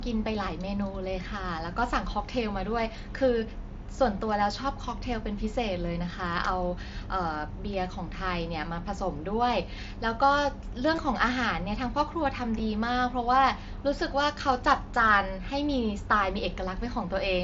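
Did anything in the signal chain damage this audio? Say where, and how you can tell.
Yes. Concealed Bluetooth headset packet loss on the radio link at 10.95–10.98 s and 12.59 s: the lost packets were patched by repeating recent waveform, giving a brief buzzy hold at 10.95–10.98 s, while the single loss at 12.59 s is nearly hidden.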